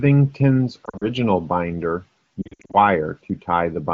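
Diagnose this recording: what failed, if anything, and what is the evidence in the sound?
Lost AMR speech frames over radio, 0.85–1.05 s and 2.42–2.76 s: scattered brief dips and warbles as the decoder repeats the last good frame, fading.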